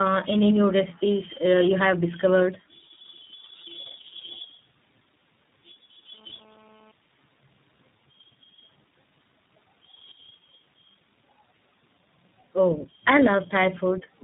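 Speech passed through three different low-rate speech codecs in a row, decoded and re-encoded at each link, a tandem speech coding chain that sounds like it ends in iLBC. Throughout, each stage compounds the last, so the voice is rough, muffled and warbly, with nothing above 3.8 kHz.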